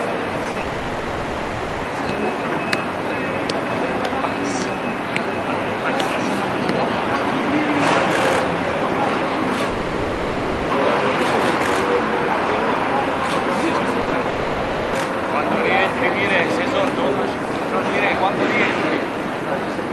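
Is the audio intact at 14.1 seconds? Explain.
No. A burst of packet loss runs from 14.01 to 14.09 s. About 60 ms of audio never arrived in time, so the receiver extended the last sound and faded it down, giving a held buzz or fading hiss before playback jumps ahead past the missing stretch.

Straight after, short concealed packet loss covers 14.09 to 14.13 s. Another 20 ms went missing, was patched by continuing the preceding sound, and then blended back into the real audio, heard as a brief smear or wobble.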